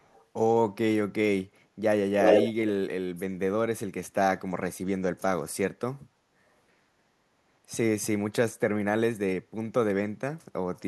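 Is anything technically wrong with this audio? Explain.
Yes. From 0.00 to 0.25 s a very faint delayed copy of the speech trails it by about 0.35 s. From 2.22 to 2.53 s the same copy returns, slightly louder than the speech itself. This is echo leak, likely from a loudspeaker-side echo canceller failing to remove the returned sound.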